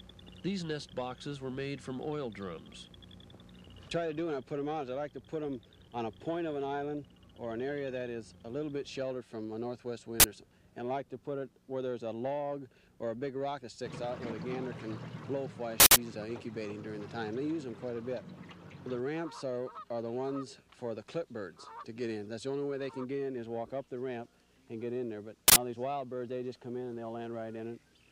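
An uninitialised buffer bursts through at 10.20 to 10.24 s, 15.80 to 15.96 s and 25.48 to 25.56 s. Blocks of 40, 160 and 80 ms were played before audio was written into them, so stale memory came out as loud, harsh digital noise.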